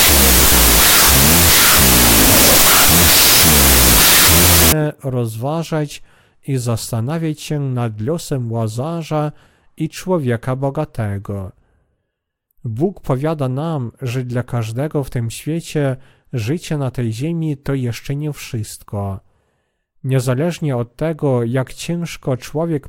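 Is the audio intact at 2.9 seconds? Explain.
No. From 0 to 4.72 s there's a wrong sample width fault: 32-bit float data read as 16-bit integers, so the speech is buried in loud noise, playing at half speed and an octave low, until "rozważać i zastanawiać się".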